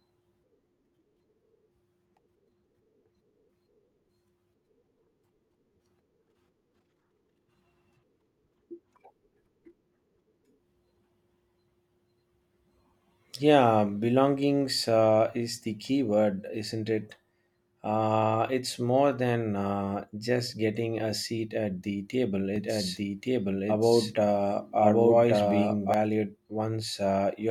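From 22.56 to 25.94 s, just after "seat at the table", the speech is most likely being captured a second time through a slower path, giving a doubled audio track. A full-band copy runs about a second behind, at about the same loudness as the original, so two overlapping streams of the same speech compete. The copy is dry, with no decay or added room sound, and it cuts in and out abruptly at those times.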